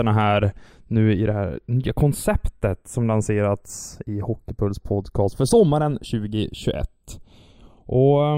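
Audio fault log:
Throughout, channels drifting apart: the two sides run on separate clocks, roughly 40 ppm apart. The offset between them grows slowly, to about a third of a millisecond by the end. In mono, comb notches sweep through the speech. This sounds like slow flanging.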